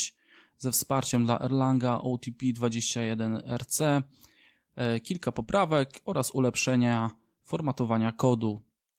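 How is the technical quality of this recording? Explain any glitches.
The speech has one audible glitch: a short concealed packet loss. It falls between 5.43 and 5.49 s, after "e kilka" and just before "oraz ulepszenia". About 40 ms of audio never arrived in time to be decoded. The receiver covered the gap by extending the preceding sound, following its pitch where it was voiced and using shaped noise where it wasn't. It then crossfaded back into the real signal. The result is a brief smear or wobble at that point.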